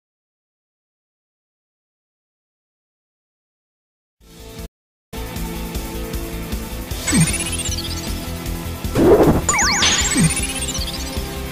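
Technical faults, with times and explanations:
4.65–5.14 s, playback stall: the player most likely ran short of buffered data, or its output thread was held up, so nothing reached the output until it caught up again. The sound cuts off abruptly in mid-flow and leaves a hole of about 460 ms of silence before carrying on. Because the break has no fade on either side, it is heard as a sudden freeze rather than a natural pause.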